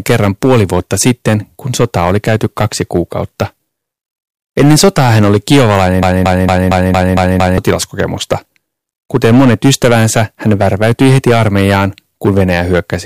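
A broken-record loop runs from 6.03 to 7.58 s in this speech clip. A fragment of about 0.23 s repeats seven times, back to back and identical each time, so the speech stutters mechanically instead of moving forward. The likely cause is a stall in the player, encoder or stream that kept re-sending the last piece of audio it held. Whatever should have played during those one and a half seconds is missing.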